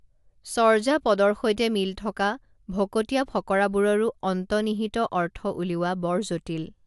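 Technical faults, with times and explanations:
No technical faults can be heard in this speech recording. There is nothing in it that calls for a timed entry.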